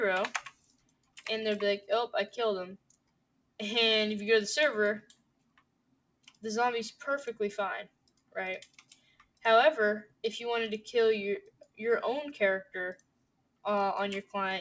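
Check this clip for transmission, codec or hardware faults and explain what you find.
A noise suppressor is processing this sound, and it repeatedly pulls parts of it down. The audio also passes through a call codec with nothing above 8 kHz, which fits a wideband G.722 link.

The noise suppressor applied to music or sounds is active for the whole clip. It was built for speech, so it mistakes steady tones, ambience and reverb for noise. Sudden attacks pass, but held material sinks. The level swings by around 20 dB, so the sound pumps and thins out.

The sound is cut by the noise suppressor at 0.47 to 1.21 s, 2.77 to 3.59 s, 5.01 to 6.44 s, 7.86 to 8.36 s, 8.65 to 9.44 s, 10.04 to 10.24 s, 11.41 to 11.80 s and 12.95 to 13.65 s. Each drop reaches about 20 to 21 dB. The longest dip lasts roughly one and a half seconds. In these spans, sustained or decaying sound fades sharply and tails are cut short.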